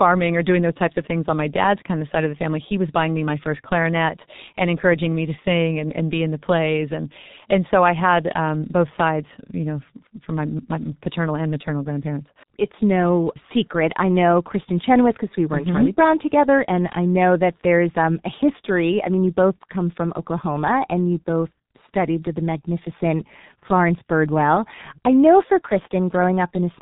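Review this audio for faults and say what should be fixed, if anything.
The whole clip has gone through a G.723.1 codec, and it's pretty heavy damage. Nothing above about 3.8 kHz survives, so the speech sounds boxed-in and muffled. The codec chops audio into 30 ms frames and rebuilds the voice from a slowly updated model. That's why the voice comes out hoarse and consonants smear together, which fits its higher-rate mode of roughly 6 kbit/s. To prevent it, capture or route the speech through a wideband codec at a decent bitrate instead of legacy telephony compression.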